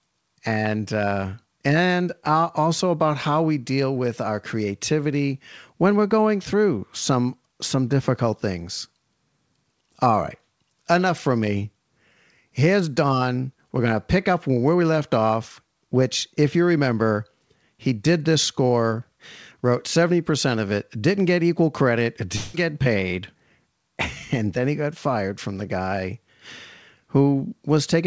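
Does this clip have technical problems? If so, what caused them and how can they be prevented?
Yes. From 22.36 to 22.56 s there is a long network dropout. About 180 ms of speech is missing, and the receiver fills the whole gap with a buzzy continuation of the preceding sound. The likely cause is packet loss on the link. On a spectrogram, the band below the G.722 codec's 8 kHz ceiling turns smeared and repetitive. On the waveform, the level stays filled, with no silent hole. Forward error correction or a more stable network connection would prevent this.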